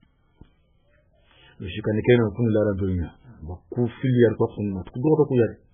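MP3 compression damage runs through the whole clip, and the likely cause is an encoder starved of bits, which fits a very low bitrate around 8 kbps. The encoder has cut the treble off entirely, leaving nothing above 3.5 kHz, so the speech sounds dull and muffled. The damage is heavy: weak frequency lines drop in and out from frame to frame, giving a watery, swirling texture, with s sounds turning metallic and chirpy and consonant attacks smeared.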